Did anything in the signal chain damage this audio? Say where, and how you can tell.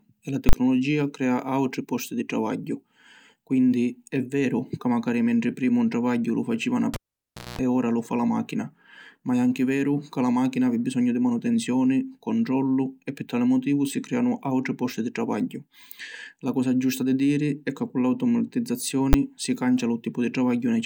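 Yes. Twice the speech is hit by a violent full-scale event. From 0.49 to 0.53 s, between "e la" and "crea autri posti di", there is a very loud pop, 40 ms of nothing, then a second pop. At 19.13 s, just before "si cancia", a 10 ms block collapses into a single bang. These are invalid numbers at full scale: a floating-point processing stage produced infinite or invalid values, and when those were converted to the output format they pinned the waveform to one extreme value for each block.

Between 6.94 and 7.59 s, after "travagghiu lu faciva na", a pop cuts the sound to near silence for about 600 ms. Within that gap there is a roughly 200 ms burst of 60 Hz mains buzz, then another pop as the sound returns before "ora lu fa la". This is a cable pulled and plugged in, in the analogue wiring. The live connection broke, and while only the plug tip touched, the unshielded contact picked up hum until the plug seated fully.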